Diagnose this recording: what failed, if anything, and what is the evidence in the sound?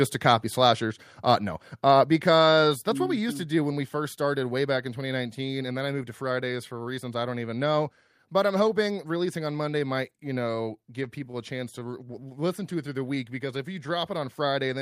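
The level drops abruptly by about 4 dB at 2.04 s after "no uh", then about 3 dB at 3.06 s after "uh because that's what". This is likely a microphone volume stepped down by call processing.

From 10.51 to 11.90 s, after "might you", around ten brief ticks and smears appear. These are scattered short gaps from network packet loss, each patched by continuing the previous sound.

From 12.04 to 14.10 s the audio drags at 94% speed with unchanged pitch, adding 137 ms. This is a jitter buffer slow-down repeating pitch periods to rebuild its reserve.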